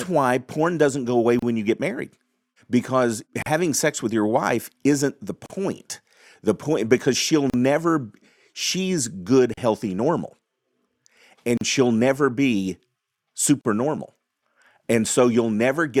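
Short silent gaps cut into the speech about every 2 s, at 1.39, 3.42, 5.46, 7.50, 9.54, 11.57 and 13.61 s. This is a gap at a join of encoded pieces. Separately encoded pieces were joined without trimming their start delay and end padding. The first gap, after "porn doesn't go away", lasts about 32 ms. The rest, including those after "point because she'll" and "she'll never she's good", last about 38 ms. Each has smeared edges, and the speech resumes where it stopped.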